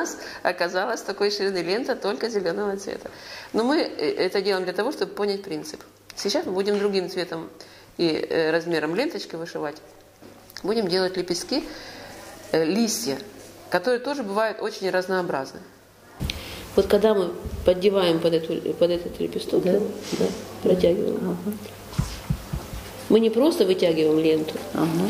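No technical faults can be heard anywhere in this audio.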